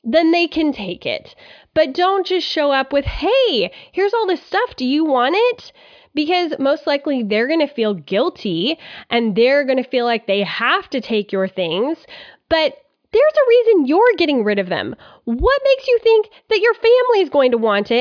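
No technical faults are audible anywhere in the speech recording.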